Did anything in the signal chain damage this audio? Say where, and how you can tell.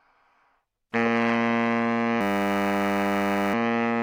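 Yes. From 2.21 to 3.54 s there is a system hang loop at the driver or buffer stage: a 10 ms slice repeats exactly, about 133 times, giving a steady 100 Hz buzz. The host stalled while the hardware kept replaying one ring-buffer segment, and little or no audio appears lost afterwards.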